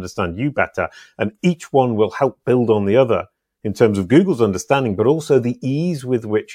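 No technical faults are audible.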